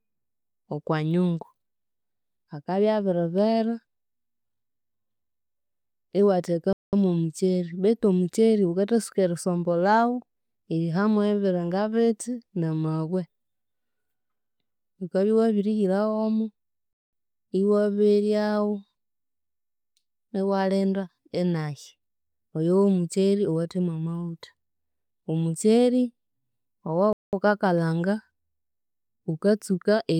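The speech was delivered in 10-second chunks with silence inserted at each join, a gap between chunks. Nothing is lost, but the sound stops abruptly for 200 ms at 6.73–6.93 s, 16.93–17.13 s and 27.13–27.33 s, leaving short holes at regular spacing.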